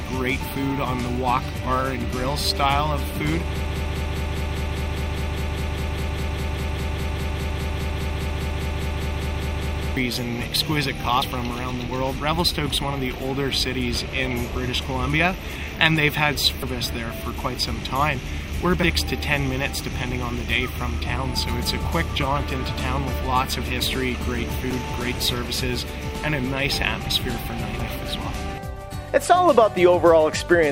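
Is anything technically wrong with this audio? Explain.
Yes, two faults are audible.

From 3.65 to 9.97 s there is a broken-record loop. A 0.2 s fragment repeats 31 times, likely because playback stalled. On the waveform it appears as identical repeating blocks.

Damaged data in a compressed stream occurs at 11.22 s, at 16.62 s and from 24.69 to 24.72 s. The decoder loses sync and searches for the next frame header, briefly disrupting the audio each time.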